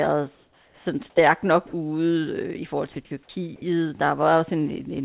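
Comfort noise in place of the background runs from 0.35 to 0.86 s, ending just before "sådan stærk nok". For about half a second the real background, sitting about 38 dB below the loudest speech, gives way to a smooth, featureless hiss about 3 dB quieter. This is likely discontinuous transmission: the sender stopped sending during the pause, and the receiver filled the gap with synthetic noise roughly matching the background's overall shape but none of its detail.

Sound dropped by the voice detector occurs four times, each lasting 60 ms: 1.67 to 1.73 s, 3.05 to 3.11 s, 3.23 to 3.29 s and 3.56 to 3.62 s, the last two following "i forhold til". In each, speech breaks off into comfort noise, costing 40, 50, 30 and 60 ms of actual sound respectively, and returns once the detector triggers again. The likely cause is quiet syllables or word endings misjudged as background, with comfort noise played in their place. 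Throughout, nothing is heard above 4 kHz, which fits a narrowband telephone codec such as G.711.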